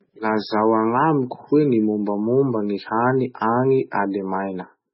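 Throughout, the speech has likely been squeezed through MP3 compression at a low bitrate, which fits about 16 kb/s. Starved of bits, the encoder discards everything above 5.6 kHz and flickers weak frequency components on and off, leaving the sound dull, watery and swirling, with smeared attacks.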